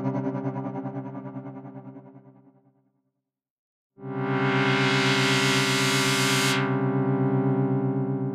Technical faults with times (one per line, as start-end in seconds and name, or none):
none